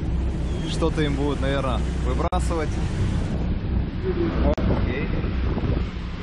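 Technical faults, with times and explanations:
Throughout: mains hum, a steady low tone at 60 Hz sitting only about 10 dB below the sound. A ground loop or a nearby transformer is coupling the power line into the signal, so the hum never lets up.
2.28–2.32 s and 4.54–4.58 s: gap at a join of encoded pieces, about 45 ms and 40 ms long, where the sound drops out and then resumes from where it stopped. Separately encoded pieces were joined untrimmed, leaving each encoder's start delay and end padding in; codec smearing softens the edges.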